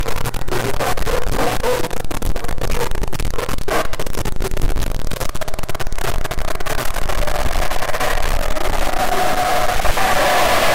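From start to finish, a harsh, buzzy distortion rides on the sound, and quiet gaps fill with gritty noise. It is a stuck bit, likely from a faulty line or converter. One fairly high bit never changes, throwing about half the samples off by a large step.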